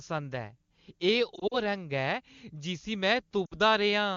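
Lost AMR speech frames at 1.36 to 1.62 s and 3.46 to 3.54 s: radio errors failed frame checksums, so the wideband decoder reused the last good pitch and vocal tract settings at falling gain. Scattered gaps up to 40 ms make the first warble, and the 60 ms loss makes the second dip.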